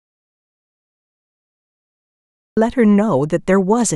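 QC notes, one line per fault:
0.00–2.57 s: audio dropout to silence. The gap is already under way when the clip starts. It is silence with no room tone. Speech cuts in abruptly at 2.57 s. The input was likely lost, with silence written until it returned.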